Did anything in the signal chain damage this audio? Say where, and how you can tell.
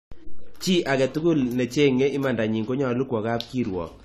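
Yes, at the codec stage. Throughout, nothing is present above 14.1 kHz and the sound is dull and smeared, likely from AAC compression at a low bitrate near 32 kbps.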